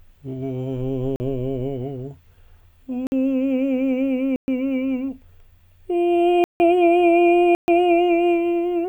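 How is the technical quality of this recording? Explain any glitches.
The music is interrupted five times by blocks of digital silence, short holes where the sound drops to nothing with no fade. They fall at 1.16 s (40 ms), 3.07 s (51 ms), 4.36 s (120 ms), 6.44 s (160 ms) and 7.55 s (130 ms). The first two are brief pops, while the longer three are clear gaps. Dropouts like these point to the output buffer not being filled in time.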